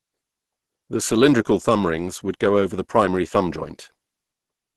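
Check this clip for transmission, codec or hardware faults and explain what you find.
One codec fault is present. Throughout the speech, Opus compression (the likely cause) in hybrid speech mode, at a rate consistent with about 16 kbps, cuts everything above 12.3 kHz. It fills starved bands with noise, so the sound is muffled, hoarse and grainy, without MP3's swirling holes.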